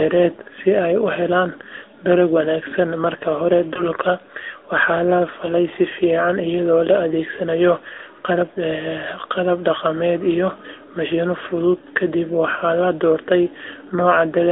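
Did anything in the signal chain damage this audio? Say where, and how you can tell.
Yes. At the codec stage, the whole clip went through the AMR narrowband mobile codec. The speech sits in a band from 300 Hz to 3.7 kHz with nothing above, and the coding damage is plainly audible as a buzzy, synthetic edge. That fits the 10.2 kbps mode.

Over the network, lost AMR speech frames struck twice: at 3.74 to 3.83 s, just after "dalag wanaagsan marka hore", and at 5.46 to 5.50 s, just before "si fiican iyadoo la". The decoder filled each gap from the last good frame, giving a brief dip or warble consistent with one lost 20 ms frame.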